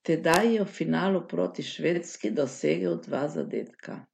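At 1.93 to 1.98 s the speech stutters as a brief stretch of repeated frames: one compressed block of 46.4 ms plays twice, which fits a single duplicated frame, adding 46.4 ms. Unlike an echo, the copy is identical and sequential, not overlapping.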